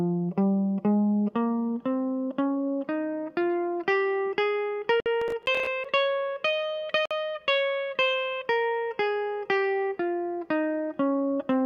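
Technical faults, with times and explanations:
5.00 to 5.06 s and 7.06 to 7.11 s, Bluetooth stall: the music drops to silence for 58 ms, then 52 ms, and resumes cleanly, likely interference holding up wireless packets so the buffer ran dry.
5.22 to 5.85 s, processor overload crackle: a gritty burst of tiny silent gaps, roughly fifteen missed buffers of about 5 ms each, unlike a stall's single clean dropout.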